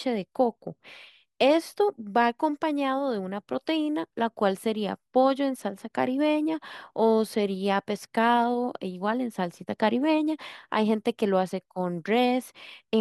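No technical faults are audible.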